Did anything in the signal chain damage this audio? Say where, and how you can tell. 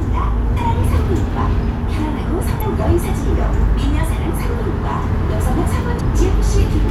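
Yes, at the codec stage: damaged data in a compressed stream causes brief blips at 0.56–0.58 s, 2.60 s and 5.99 s, where corrupt frames throw the decoder out of sync.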